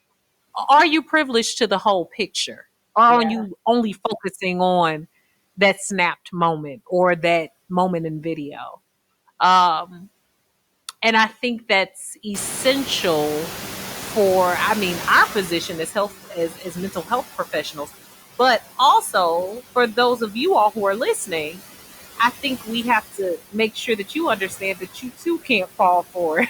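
Throughout the speech, noise suppressor artifacts are present. The suppressor pulls steady background down by about 15 dB, frame by frame, so the residue dips between phrases and swells under them. That gating rhythm tracks the speech, which sets it apart from a steady hiss.

At about 12.5 s the room noise jumps by about 20 dB. From 12.34 to 16.08 s the noise suppressor is catching up. Its noise estimate lags, so the louder background first passes with only about 10 dB of reduction, then settles lower over those 3.7 seconds. The slow fade is what separates this from a gain change.

Speech cut by the noise suppressor follows at 16.35–17.11 s, 17.63–17.89 s just before "but also for", 19.95–20.35 s before "you all who are", 21.27–21.59 s after it, and 23.12–25.8 s. The suppressor treats parts of the speech as noise and turns brief fragments down by about 9 to 11 dB, and by about 17 dB in the last stretch. 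Syllables there sound swallowed, unlike a dropout, which silences everything.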